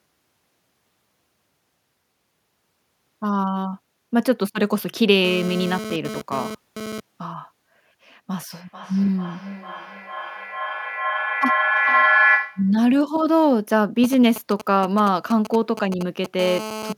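GSM phone buzz appears from 5.25 to 7.0 s: a hard, raspy 217 Hz buzz rich in harmonics, about 10 dB below the speech. A nearby 2G phone's radio pulses are being rectified by the audio circuitry, and because the phone is moving data, the buzz stutters in and out.

Feedback echo between two devices runs from 8.5 to 12.76 s. Two devices in the same room are on one call, so each replays what the other's microphone picked up, and neither echo canceller can remove the other's output. The speech returns roughly every 0.4 s, thinner and more ringing each pass, and the repeats pile up to about 1 dB above the speech rather than dying away.

GSM signalling bursts follow from 14.04 to 16.41 s: a galloping dit-dit-dit of brief 217 Hz buzzes, at a level somewhere around 10 dB under the speech. The nearby phone is sending only short groups of radio bursts, such as when setting up a call. From 16.41 to 16.93 s this changes to a steady GSM phone buzz, still about 10 dB down, because the phone is now transmitting its regular bursts in a call.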